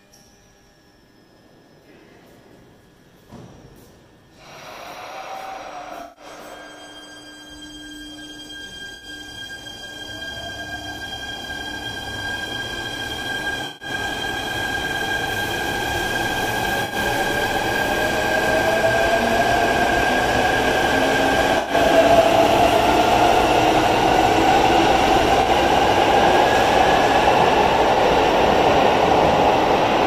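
Seven short damaged stretches occur in the audio, at 6.02–6.24 s, 8.95–9.05 s, 13.66–13.88 s, 16.84–16.95 s, 21.58–21.73 s, 25.41–25.47 s and 27.94–27.99 s. These are corrupt frames concealed by the AAC decoder. It muted or smeared each damaged stretch instead of squeaking.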